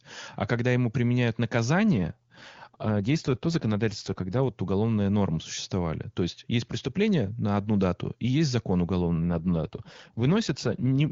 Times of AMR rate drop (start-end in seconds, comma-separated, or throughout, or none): 1.93-4.42, 9.02-11.11